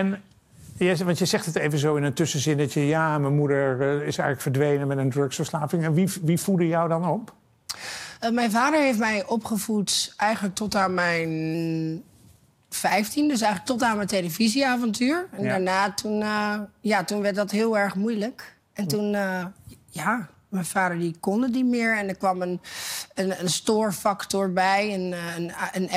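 Three drift correction steps: the sound slows about 6% and drops a semitone at 5.58–6.72 s and 10.36–11.54 s, then runs 6% fast and a semitone sharp at 18.16–19.42 s, likely from clock-matching rate jumps.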